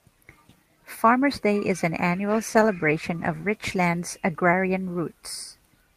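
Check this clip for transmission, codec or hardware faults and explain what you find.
One transmission fault: a call bitrate drop from 2.33 to 4.37 s, with the rate falling from 32 to 16 kbps and holding its lowest for 1.22 s. The coarser encoding roughens the speech continuously, without the gaps or clicks of packet loss.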